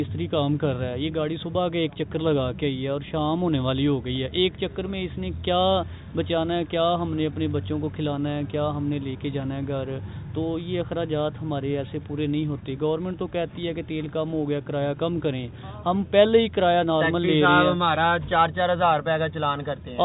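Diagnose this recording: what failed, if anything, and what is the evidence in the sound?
Nothing failed, and the sound shows no evidence of a fault; the absence of anything above 4 kHz is simply how the G.711 mu-law call path carries audio.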